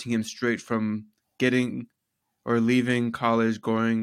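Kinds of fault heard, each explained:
No technical faults detected.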